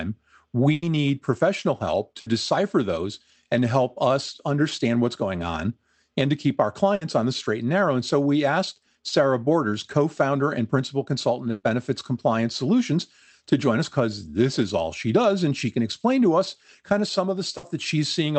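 Bursts of packet loss occur at 0.73–0.85, 2.20–2.29, 6.95–7.04, 11.51–11.66 and 17.57–17.66 s. Each time the receiver extends the last sound as a fading buzz or hiss before resuming later, skipping about 60 ms of audio, or about 120 ms at 11.51 s.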